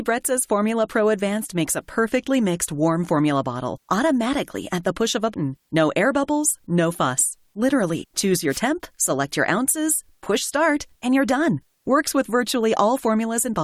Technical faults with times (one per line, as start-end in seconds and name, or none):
5.33 damaged data in a compressed stream
8.02 damaged data in a compressed stream
8.48-8.61 wireless microphone noise hit